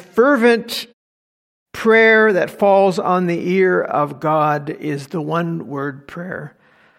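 No technical faults are audible.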